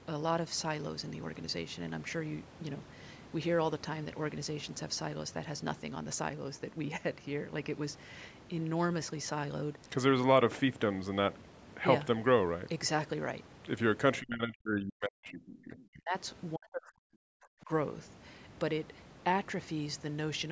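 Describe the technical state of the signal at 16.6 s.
At 16.6 s the speech sinks almost to silence, a very deep drop that breaks it up from 16.55 to 17.69 s. This is speech suppressed in double talk, likely an echo canceller muting the near talker while mistaking its speech for echo of the overlapping far-end speech.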